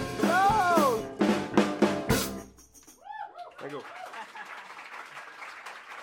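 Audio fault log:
No faults heard in this music.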